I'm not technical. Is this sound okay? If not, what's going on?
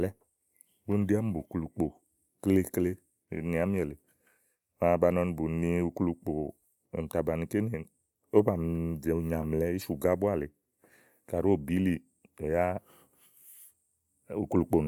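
Yes, it's fine: nothing in this recording sounds broken or glitchy, so there's nothing here to worry about.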